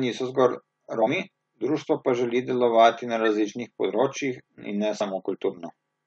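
Whole compressed frames were dropped from this speech recording, either missing from the file or rejected by the decoder as damaged, so playback jumps forward past them. At 1.01 to 1.07 s, between "niso zgolj" and "društvo pa želi delovati", about a tenth of a second of audio vanishes. At 5.00 s a shorter skip of roughly 50 ms occurs.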